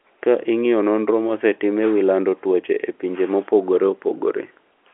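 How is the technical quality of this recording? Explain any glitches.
There are no glitches to explain: the speech comes through the usual narrow band of G.711 telephone coding, with nothing above about 3.8 kHz, and nothing else in it calls for comment.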